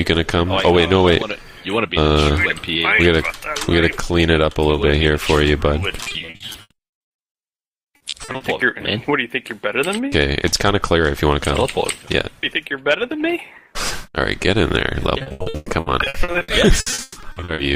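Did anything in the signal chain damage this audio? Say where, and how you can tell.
Yes, the network stage did. Repeated packet loss gives a robotic sound from 6.03 to 8.42 s and again from 15.18 to 17.60 s. In each stretch, many short holes follow each other closely. The receiver fills each one by stretching the last sound it got. About 44 percent of each span is patched this way. That is why the audio turns choppy and robotic. The longest holes are about 80 ms in the first stretch and 140 ms in the second.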